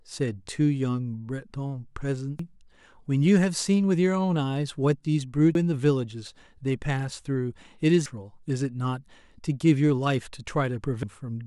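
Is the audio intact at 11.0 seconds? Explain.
No. At 11.03 s the speech is broken by damaged data in a compressed stream. Part of the encoded data at that point is corrupt: bytes were lost, zeroed or overwritten. The decoder misreads the affected frame and loses sync. It then hunts for the next valid frame header before normal decoding resumes. The result is a brief chirp, squawk or blip cutting across the speech, lasting only an instant.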